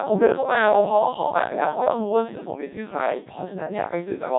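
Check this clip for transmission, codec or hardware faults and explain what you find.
The clip has one fault running throughout: a Codec 2 vocoder. From start to finish, the speech was reduced to pitch, voicing, energy and a coarse spectral envelope at a very low rate, which fits about 1.6 kbit/s, and then resynthesised from sine waves. The original waveform is gone, so the voice sounds heavily robotic and buzzy, with nothing above 3.8 kHz.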